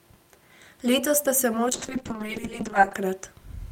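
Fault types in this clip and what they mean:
call bitrate drop: The call's bandwidth estimate fell, so the encoder had far fewer bits to spend. From 1.72 to 3.07 s the speech turns rough and muffled, with the highs cut away. This fits a fall from 64 kbps to about 7 kbps.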